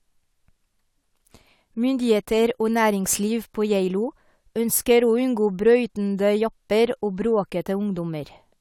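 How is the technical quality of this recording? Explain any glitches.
Nothing in the speech recording jumps out as a glitch, so there's nothing here to explain.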